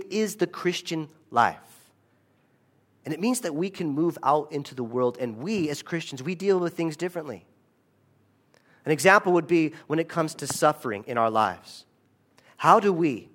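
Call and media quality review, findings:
Nothing stood out on listening to the speech in this recording.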